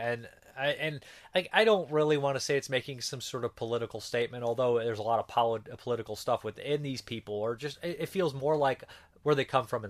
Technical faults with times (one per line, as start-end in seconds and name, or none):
0.71-9.48 clock drift buffer slips